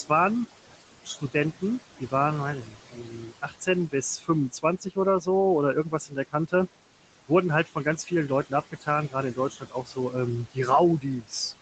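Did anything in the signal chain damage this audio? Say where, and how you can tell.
Yes. The call-processing noise suppressor is the culprit. It pulls the room noise down by about 17 dB frame by frame, so the background sinks in pauses and swells back under the speech across the whole clip.

The same suppressor also misread parts of the speech as noise and attenuated them by about 15 to 17 dB, at 1.04–1.62 s, 2.62–5.27 s, 5.74–6.53 s, 7.66–10.14 s and 11.0–11.33 s. Within those spans, soft consonants and word endings sound swallowed or faint.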